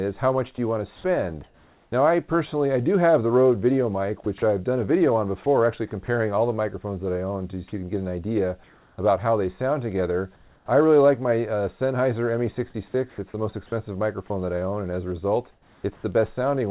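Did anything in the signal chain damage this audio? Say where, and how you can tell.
Yes. The damage sits in the call-processing stage, on top of a call codec whose band stops at 4 kHz, which fits 64 kbps G.711 A-law.

Comfort noise in place of the background appears at 0.96–1.92 s, 8.64–8.98 s and 10.36–10.68 s. In each pause the real background gives way to a steady, featureless hiss. At 8.64 s and 10.36 s that background sits about 35 dB below the loud passages. It is about 1 dB quieter at 8.64 s and about 4 dB quieter at 10.36 s. The likely cause is discontinuous transmission: the sender stopped sending, and the receiver synthesised noise to fill the gap, 560 ms of it in the first stretch.

Onset clipped by the voice detector, at 1.90–1.92 s. The returning sound starts abruptly at the very end of that first synthetic stretch. The first 20 ms of it are missing and the soft beginning is gone. 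The sender's voice detector was likely slow to notice that sound had resumed, so that opening was never sent, and the receiver played comfort noise where it should have been.

Sound chopped by the voice detector, at 4.24–6.08 s and 13.1–16.04 s. Here the audio turns choppy. Quiet edges drop out, with about 100 ms replaced in the first stretch and 500 ms in the second. This likely comes from the detector toggling transmission on and off repeatedly, so that low-level portions fell below its threshold and were filled with comfort noise.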